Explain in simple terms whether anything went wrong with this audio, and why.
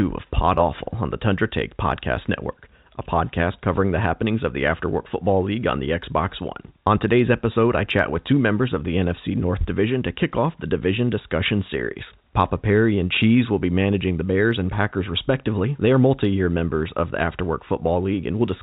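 Nothing went wrong; it sounds like ordinary phone audio.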